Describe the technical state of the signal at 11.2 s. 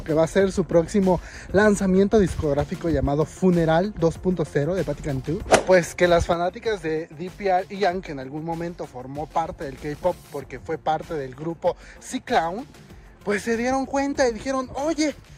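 At 11.2 s the signal is in a one channel drop out that begins at 6.33 s and runs to the end of the clip. One stereo channel has gone silent, and after the mono sum the material shared by both sides falls abruptly by about 6 dB, likely because that channel was lost. Anything carried only on the missing side is gone. On the waveform the envelope steps down at 6.33 s and stays lower. The spectrogram darkens evenly across all frequencies from that point on.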